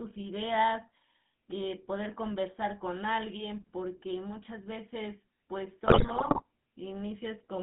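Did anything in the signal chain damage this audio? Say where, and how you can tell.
Yes. Codec stage: the whole clip carries GSM full-rate codec damage, a buzzy, gravelly roughness that fits 13 kbps full-rate coding. A spectrogram shows a hard band of roughly 150 Hz to 3.6 kHz, with harmonics smeared into coarse, grainy striations.

Network stage: from 5.86 to 6.42 s, GSM bit errors break the speech into squawks, pops and gargling, which points to a few percent of bits flipped on a weak radio link. Corrupted filter, pitch and gain values show as frame-long level spikes on the waveform and distorted, blotchy bands on the spectrogram.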